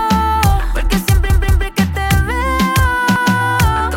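Late-arriving audio made the device replay its last 186 ms buffer, a repeated buffer, fitting 8192 samples. It plays twice extra at 1.30–1.67 s and once at 3.16–3.34 s, each a stutter with hard joins.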